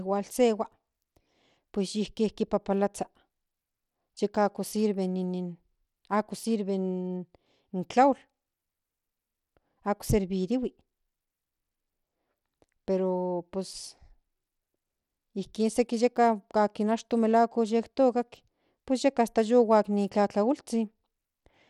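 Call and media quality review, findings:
Bluetooth SBC compression, throughout the speech. Plainly audible coarse grit, with nothing above 16.8 kHz. Likely cause: a starved SBC bit pool, consistent with roughly 96 kbps, that leaves the top sub-bands nearly empty and quantises the rest coarsely, adding aliasing noise.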